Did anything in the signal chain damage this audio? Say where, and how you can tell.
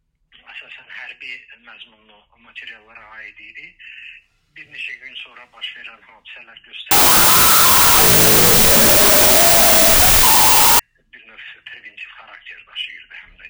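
Yes. There is a wrong sample width fault at the sample-format conversion stage from 6.91 to 10.79 s. Harsh, loud noise buries the sound, which plays at half speed, an octave low. This fits 32-bit float data read as 16-bit integers, splitting samples into meaningless halves.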